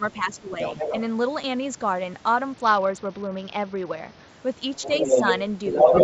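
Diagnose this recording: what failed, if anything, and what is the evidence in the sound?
From the start to 0.59 s the speech dips and drops out in fragments, about 10 dB at its deepest and around 0.4 s in all. This is likely speech suppressed in double talk: during overlap, the call's echo canceller treated the near talker as echo and attenuated both.

A second voice comes through under the speech from 0.6 to 1.01 s, a few dB below it. It returns from 4.76 to 5.4 s, somewhat louder than the speech, and from 5.66 s to the end, well above it. This is likely the other side's voice leaking through: the far end plays on the loudspeaker, and the echo canceller in the call processing left that residue in the microphone signal.

From 2.53 to 4.28 s the treble dulls and a gritty quantisation noise rises, which fits a Bluetooth SBC bit pool drop, with the bit pool falling from around 28 to around 8. 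The link congested, and the codec starved its upper sub-bands and coarsened the rest until the rate recovered. The missing content above 8 kHz throughout belongs to the call's band limit, not to this fault.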